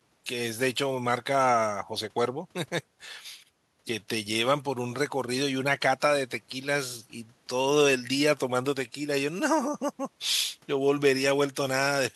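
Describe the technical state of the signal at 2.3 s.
At 2.3 s the speech signal is intact, with no dropout, distortion, glitch or other fault audible at that point.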